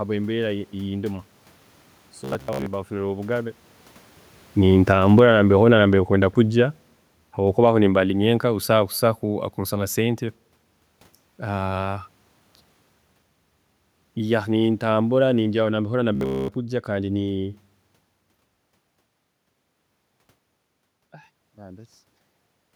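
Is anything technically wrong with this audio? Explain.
Yes. Two kinds of fault are audible.

From 2.24 to 2.66 s and again from 16.15 to 16.51 s there is robotic sound from repeated short buffers. New audio likely stopped arriving in time, so the last stretch was looped. A 66.8 Hz buzz fits a loop of about 15 ms. For most of each span the voice becomes a rigid, metallic drone.

Automatic gain falling occurs from 4.56 to 5.35 s and from 7.48 to 10.26 s. The gain control judged the input too loud or its background noise too strong and pulled its gain down gradually, by about 8 dB and then about 4 dB. The voice and the room noise sink together. This differs from the talker's own movements near 3.5 and 18.5 s.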